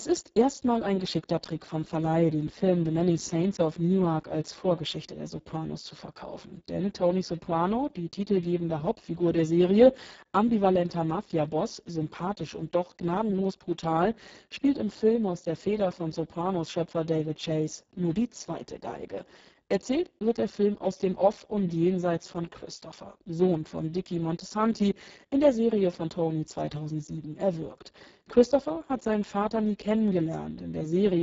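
A speech recording runs about 31 seconds, and the Speex codec damage lasts throughout. Damage is heavy. The voice sounds hoarse and noisy. At this setting the codec has very few bits for the excitation signal, so the buzz-like source of the voice is crudely rebuilt. The sound points to a low bitrate near 5.8 kbps. Nothing is present above 7.7 kHz.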